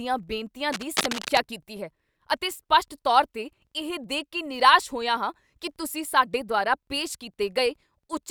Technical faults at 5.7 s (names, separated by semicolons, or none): filter restarted on every block